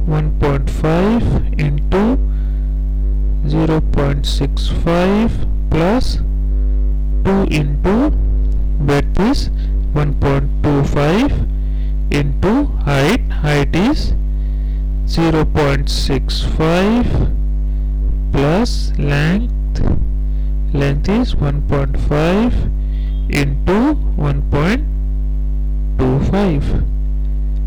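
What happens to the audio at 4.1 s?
At 4.1 s the audio is hard clipped, as it is for the whole clip. The signal is driven about 26 dB past what the stage can pass. Every peak is sliced off flat. Nearly a third of the samples sit pinned at the limit. Those squared-off tops add harmonics high in the spectrum. The result here is a harsh, constant fuzz on every loud moment, not just occasional crackle on peaks.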